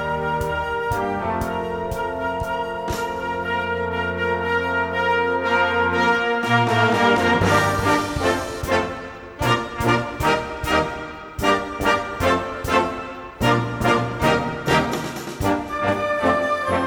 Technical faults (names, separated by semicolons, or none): none